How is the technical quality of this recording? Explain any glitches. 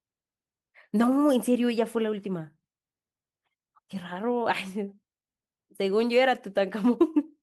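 Nothing stood out as a technical problem on listening to this recording.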